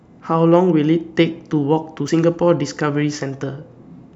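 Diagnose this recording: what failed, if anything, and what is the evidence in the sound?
At 2.08 s the speech jumps ahead with no gap of silence. The failure sits at the driver or buffer stage, likely a dropped buffer (overrun). Samples were overwritten before being read, so roughly 70 ms vanished and the edges were joined.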